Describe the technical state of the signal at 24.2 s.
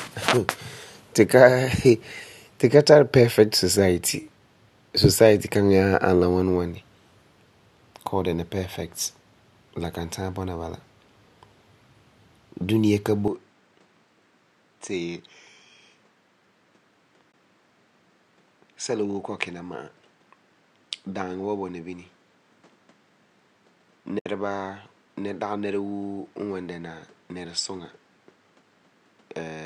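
Right at 24.19 s there's AAC frame loss with muting: about 70 ms, to 24.26 s, where zeroed frames leave a soft-faded hole, consistent with roughly seven dropped frames. Underneath, you're still on the poorer input the signal likely switched to at 13.28 s. Nothing above 9.7 kHz, a little quieter, and a faint new noise floor.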